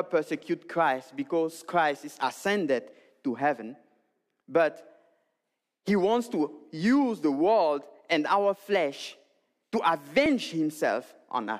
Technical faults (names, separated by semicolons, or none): dropped buffer (overrun)